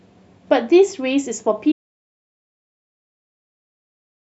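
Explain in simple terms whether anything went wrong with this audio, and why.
Something did go wrong. At 1.72 seconds the speech cuts off in mid-flow, and only complete silence follows until the clip ends. This is an audio dropout to silence. Even the faint background hiss of the room disappears, so the quiet is not a pause. The likely cause is that the input was lost, perhaps through a loose cable or an accidental mute, while the recorder kept writing empty sound. Whatever was said after that point is gone.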